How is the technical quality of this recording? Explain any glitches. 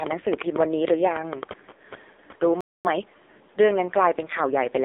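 The technical quality is poor. The speech has heavy mobile-codec damage throughout, plus a short dropout, a playback stall and a hurried stretch just after it.

AMR narrowband mobile codec, throughout: The whole recording sits in a narrow line band of roughly 300 Hz to 3.7 kHz. Nothing reaches the upper range, so the speech sounds thin and boxed-in. The codec models the vocal tract and excites it with a handful of pulses per short subframe. Here the damage is heavy, with a buzzy, synthetic edge on the voice, which fits the low 5.9 kbps AMR-NB mode.

Lost AMR speech frames, 1.72 to 1.78 s: Two consecutive frames, about 40 ms of speech, failed to arrive intact. The decoder filled the gap by repeating its last good pitch and vocal-tract settings at falling gain. The result is a brief smeared dip, a moment where the sound stretches and sags. The voice then resumes rough for an instant as the decoder recovers its state.

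Playback stall, 2.61 to 2.85 s: The audio cuts off mid-flow and goes silent for about 0.24 s before continuing. The likely cause is the player running short of buffered data, or its output thread being held up, so nothing was written to the output until it recovered. It is long enough to hear clearly as a hole in the speech rather than a natural pause.

Time-compressed catch-up, 2.85 to 3.09 s: Right after the stall, the player works off its backlog by playing about a quarter-second at 2.0 times speed. It does this by cutting out small pieces and cross-fading the remainder, which keeps the pitch normal. The speech therefore sounds rushed but not chipmunk-like.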